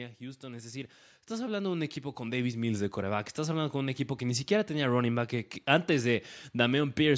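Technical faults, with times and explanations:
0.18–4.08 s, automatic gain rising: the call's gain control judged the speech too quiet and slowly pushed it up about 11 dB, so voice and background swell together.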